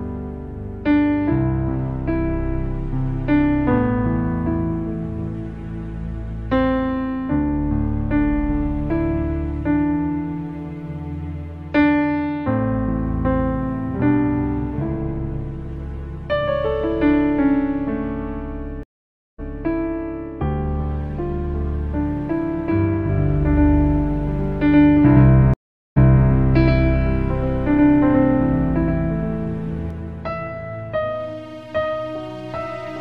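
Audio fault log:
18.83–19.59 s and 25.54–26.29 s, stream reconnect: the audio drops to silence for 0.55 s and then 0.43 s. A fresh decoder restarts it 0.21 s and 0.33 s earlier, so a short stretch repeats. The waveform shows a flat gap followed by a brief fade-in, and the spectrogram shows a blank vertical band.
23.10–29.90 s, doubled audio track: a second full-band copy of the sound runs about as loud as the original and roughly 150 ms behind it, with no decay or room colour. It starts and stops abruptly. The likely cause is a second, slower capture path. The spectrogram shows every onset twice, and the waveform shows paired attacks.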